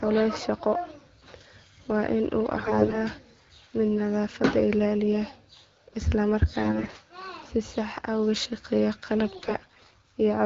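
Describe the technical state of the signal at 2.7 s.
AMR bit errors run from 2.54 to 2.98 s. The weakly protected bits in the wideband frames arrive flipped, roughly one in seven, while the checked core bits still pass. The excitation pulses land misplaced and the gain and spectral values drift, so the speech keeps its pitch and level but turns hoarse, scratchy and gargly.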